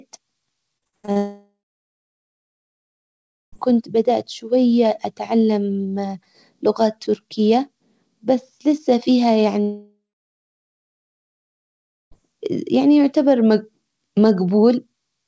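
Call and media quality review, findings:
Repeated packet loss (robotic sound), 0.78–1.17 s: seven short holes, longest about 71 ms, patched by concealment over roughly 60% of the span. Choppy, with speech fragments surviving between holes.

Long network dropouts, 1.17–3.54 s before "كنت بدأت شوية اتعلم" and 9.61–12.13 s after "تركية بس لسه فيها", resuming at "يعني يعتبر": a fading concealment buzz, then about 2 s of silence. Unlike the burst loss, no audio survives in between. Likely a sustained network outage.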